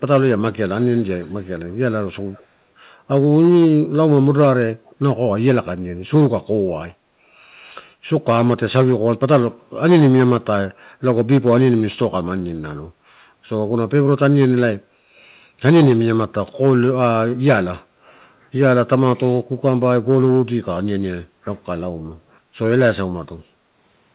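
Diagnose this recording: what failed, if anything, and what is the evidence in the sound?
Call processing is where this one went wrong: there's an echo leak. A faint delayed copy of the speech trails the talker from 0.81 to 1.5 s, again at 1.70–1.76 s, 2.22–2.46 s and 4.86–4.92 s, each time about 254 ms behind and sitting very low, roughly 30 to 35 dB under the direct speech. The likely cause is a far-end loudspeaker whose echo canceller let residual pickup slip back. The narrowband sound, with nothing above 4 kHz, fits a telephone codec.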